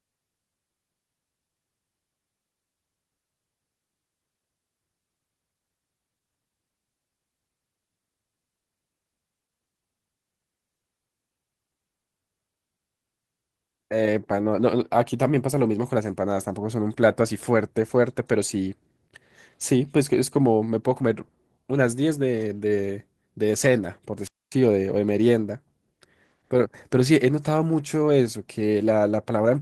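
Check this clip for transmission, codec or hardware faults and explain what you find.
One fault is present in this speech clip. A wireless microphone squelch dropout occurs from 24.21 to 24.54 s. The analogue FM radio link fades, hiss rises briefly, and the receiver's squelch then mutes the output, leaving a hole of near silence lasting about 0.25 s before the speech returns.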